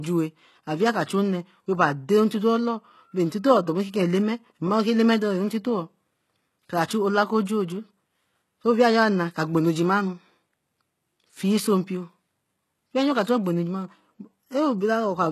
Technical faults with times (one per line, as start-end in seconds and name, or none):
0.00-15.32 HE-AAC compression